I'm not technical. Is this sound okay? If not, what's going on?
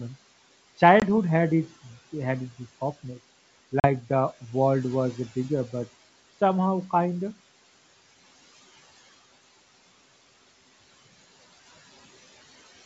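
No. Noise suppressor artifacts run through the whole clip: a filter keeps pushing the background hiss down between words, so it pumps.

Packet loss on an ADPCM call happens twice. At 1.0 s, just before "had its had its", about 20 ms drops out, which fits a single lost packet. At 3.80 to 3.87 s, between "had its this softness" and "the world was bigger", about 40 ms goes missing, which fits two packets. Each gap is abrupt silence, and the speech comes back with a brief click or roughness while the decoder catches up.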